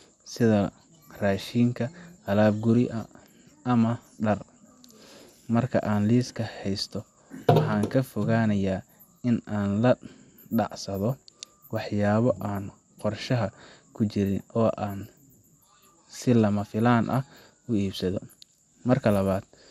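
Speech with plainly audible MP2 compression throughout, likely from MPEG Layer II coding at a low bitrate around 80 kbps. Nothing is present above 16.3 kHz, and the remaining sub-bands sound coarse and gurgling. Unlike a plain low-pass filter, the granular, flickering distortion is layered over the dullness.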